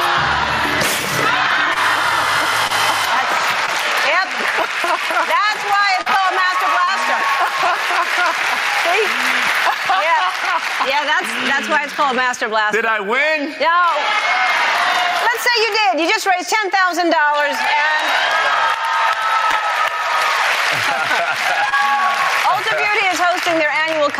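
Gain pumping runs through the whole clip. The input gain was likely set far too high, so a fast limiter or compressor keeps clamping down on every loud moment and releasing in the gaps, a swing of around 10 dB. The level contrast between loud and quiet parts is flattened into a squashed, breathing result.

Short concealed packet loss occurs at 1.73, 2.67, 3.66, 6.01, 6.84, 19.51 and 21.69 s. At each point a stretch of audio failed to arrive in time. Most gaps are about 20 ms, and those at 6.01 and 6.84 s are about 40 ms. The receiver patched each hole by extending the preceding sound and then crossfading back, leaving a brief smear or wobble.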